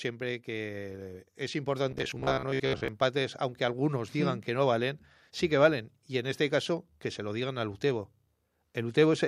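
Automatic gain rising from 0.45 to 3.1 s: the gain control judged the input too quiet and lifted it about 6 dB, so speech and background swell together.

Robotic sound from repeated short buffers, 1.91 to 2.88 s, just before "aunque algunos digan que": a rigid 66.8 Hz metallic buzz, likely from roughly 15 ms chunks being replayed, with about half the audio repeated.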